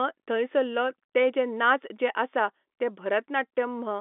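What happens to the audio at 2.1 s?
Nothing goes wrong at 2.1 s: the speech there carries straight through the telephone-band G.711 coding without any dropout, click or distortion.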